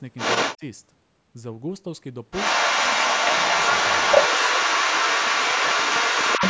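Other side's voice leaking through, 0.17 to 0.58 s: a second voice sits roughly ten decibels above the talker, likely loudspeaker echo the echo canceller failed to remove from the microphone.

Speech suppressed in double talk, 0.56 to 0.63 s: the talker's voice briefly drops by about 20 dB as both sides overlap, likely the canceller turning everything down because it cannot separate talker from echo.

Other side's voice leaking through again, 2.31 s to the end: the second voice returns and stays prominent, again roughly ten decibels above the talker, with the same likely residual-echo cause. The band-limited sound, with nothing above 8 kHz, comes from the call's microphone processing.

Speech suppressed in double talk, 4.27 to 6.41 s: a longer, shallower dip of about 5 dB pulls the talker's level down under the overlapping echo for about two seconds, with the same likely cause.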